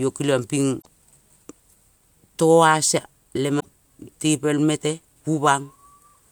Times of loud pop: none

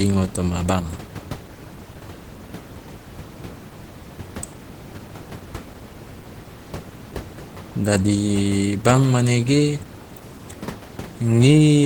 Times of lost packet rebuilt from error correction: none

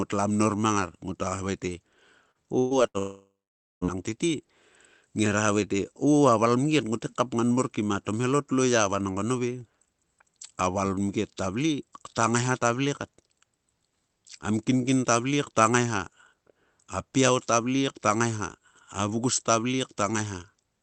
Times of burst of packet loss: 2.59-2.97

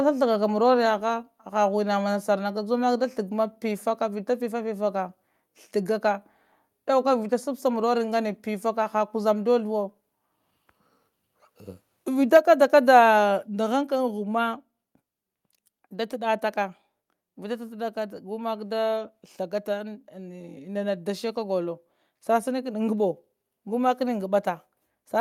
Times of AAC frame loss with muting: none

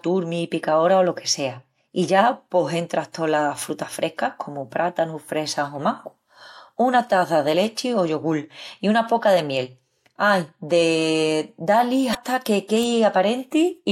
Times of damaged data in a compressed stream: 12.11-12.15

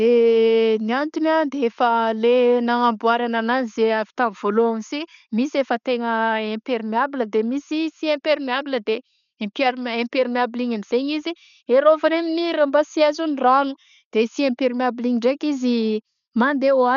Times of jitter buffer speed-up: none

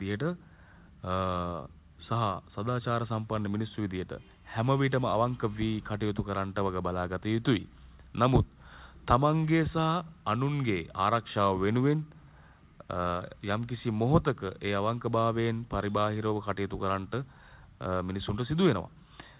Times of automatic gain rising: none

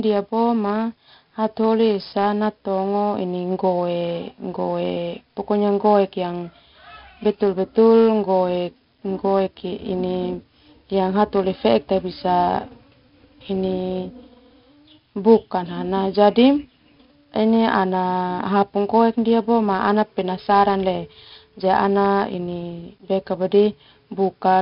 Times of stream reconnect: none

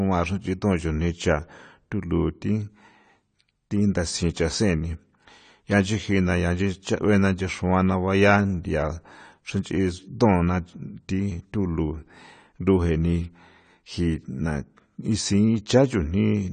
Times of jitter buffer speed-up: none

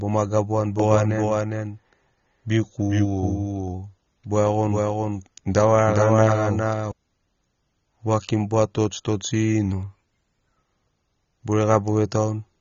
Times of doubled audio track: 0.79-6.92

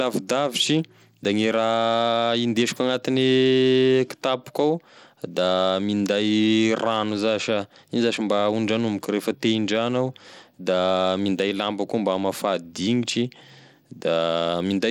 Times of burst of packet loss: none

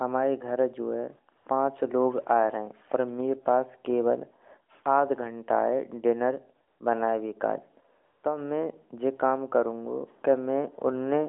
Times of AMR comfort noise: 1.38-1.46, 6.68-6.80, 8.04-8.24

